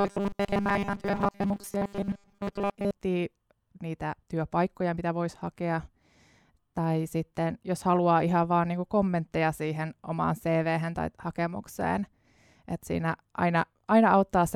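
From 0.01 to 2.91 s the speech turns into a rigid, metallic buzz fixed at 200 Hz, with the words still roughly traceable underneath. This is robotic sound from repeated short buffers, likely caused by audio arriving too seldom so that a 5 ms chunk is replayed over and over while about 70% of the real signal is skipped. Unlike gaps or crackle from dropouts, there is no silence here, just a steady buzz.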